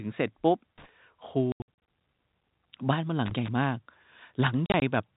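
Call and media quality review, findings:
Loose connector crackle, 0.78–0.89 s and 3.26–3.48 s. A worn or dirty contact is making and breaking, chopping the signal into irregular crackle and scratching. On the waveform these stretches look ragged and chopped. On the spectrogram they show as broadband vertical streaks.

Packet loss filled with silence, 1.52–1.66 s and 4.66–4.82 s. The receiver inserted silence for missing packets. The first cluster loses 220 ms across 360 ms, with an 80 ms longest run. The second loses 80 ms across 160 ms, with a 40 ms longest run. Gap sizes fit 20 ms packets. The waveform shows hard-edged flat gaps, and the spectrogram shows blank columns below the G.711 4 kHz ceiling.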